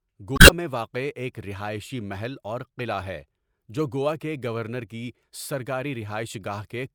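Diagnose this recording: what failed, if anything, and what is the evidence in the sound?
The fault sits in the codec stage: damaged data in a compressed stream. From 0.35 to 0.50 s the speech is broken by a brief glitch of about 150 ms. Corrupted bytes there made the decoder misread frames and lose sync until it found a valid frame header again. Network packet loss would instead leave a gap or a smoothed, repeated fill rather than this decoder glitch.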